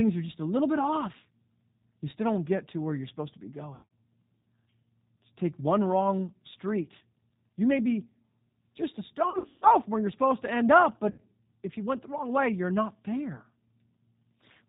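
Throughout the speech there is a rough, slightly synthetic texture, with nothing above 4 kHz. This is the G.729 codec, in its G.729A form at 8 kbit/s, and its damage is plainly audible. Rather than sending the waveform, the codec rebuilds each 10 ms frame from a vocal tract filter, a pitch predictor and a few pulses, so fine detail is lost.

From 3.75 to 3.91 s the voice is stretched into a fading tone or noise, then comes back weak. This is VoIP packet loss concealed by the speech codec. About 140 ms of audio went missing across a 160 ms stretch, with the longest gap 80 ms. The decoder filled it by repeating its last pitch and filter at falling gain. The same stretching returns more heavily from 9.30 to 9.67 s, where 240 ms was lost across 320 ms with a 140 ms longest gap. It comes back briefly at 11.10 s, where 80 ms was lost over about 0.11 s. Each time, the voice stays thin for a moment after the gap, because every rebuilt frame depends on the one before it.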